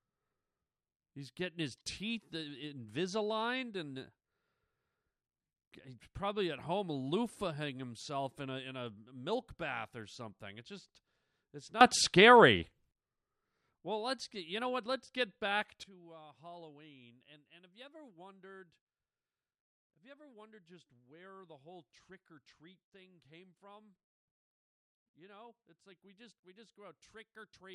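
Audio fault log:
11.81–12.91 s, sudden gain jump: right after "just it's" the sound and noise floor leap up about 17 dB together, likely a gain change applied without a ramp.
15.84 s to the end, sudden gain jump: after "get back" everything drops about 16 dB in one step and stays down, likely an abrupt digital gain setting.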